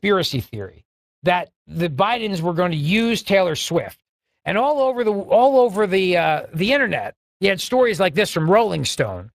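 From start to finish the speech carries Speex codec damage, plainly audible as a hoarse, noisy grain: the CELP coder is short of bits for the excitation, which points to a setting around 22 kbps. Nothing survives above 15.3 kHz.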